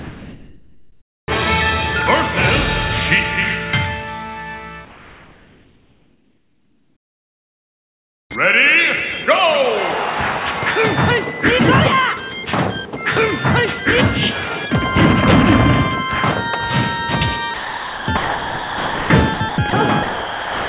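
Sound dropped by the voice detector at 0.00–1.28 s replaces the opening with steady noise until sending resumes, likely because the sender's detector judged that sound to be background. Comfort noise in place of the background at 4.85–8.30 s turns the real background, about 41 dB below the loudest sound, into smooth featureless hiss about 3 dB quieter, likely as the sender paused transmission. Sound dropped by the voice detector returns at 17.54–18.08, 18.17–19.10, 19.34, 19.49–19.58, 19.70–19.73 and 20.03 s to the end, chopping the sound into fragments with brief patches of flat noise. All of it arrives through a band-limited call path with nothing above 4 kHz.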